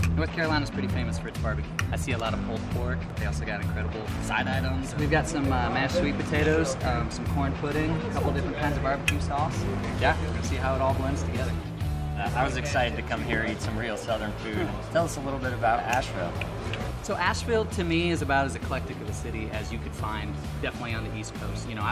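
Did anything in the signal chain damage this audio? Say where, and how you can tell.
No, nothing in the signal chain damaged this audio that I can hear.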